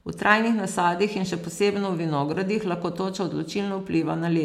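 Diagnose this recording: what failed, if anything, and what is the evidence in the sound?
Nothing in the recording chain has failed, and the speech signal arrives continuous and intact at every stage from capture to playback.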